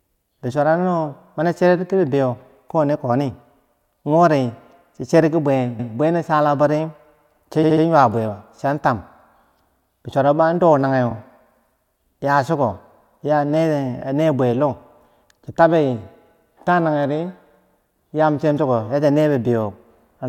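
Speech marred by repeated frames: duplicated compressed blocks replay at 5.78 s (139 ms, once), 7.62 s (70 ms, three extra times) and 11.10 s, causing audible stutters.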